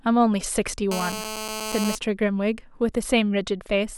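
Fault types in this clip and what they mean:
GSM phone buzz: a nearby 2G handset on a call pulses its transmitter about 217 times a second, and the audio circuitry rectifies those bursts into a hard, raspy buzz over the speech from 0.91 to 1.95 s, about 7 dB below it. A spectrogram shows a comb of harmonics stacked on 217 Hz.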